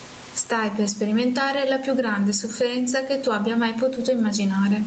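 Gain pumping throughout: the gain swings about 15 dB, pulled down under loud speech, likely from excessive mic gain driving a fast limiter.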